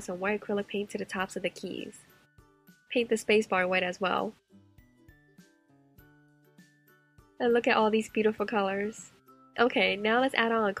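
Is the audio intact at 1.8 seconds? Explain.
Yes, the audio is intact at 1.8 seconds, with no fault at that moment.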